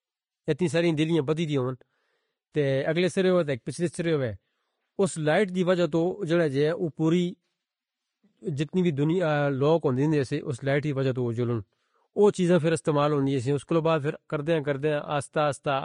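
The whole speech track sounds hissy and grainy, with nothing above 10.5 kHz; that's likely Vorbis compression at a low bitrate, around 31 kbps.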